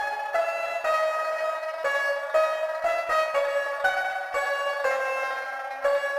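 A crude rate conversion runs through the whole clip. The sample rate was raised without a proper filter, and the pattern of the error fits a step from 44.1 kHz to 48 kHz. Samples were simply repeated to fill the gaps, so the waveform gets small stair-step jumps at a regular rhythm set by the two rates. That error sits roughly 25 dB below the signal. It is heard as a gritty, inharmonic fizz that rides on the louder and brighter parts of the sound.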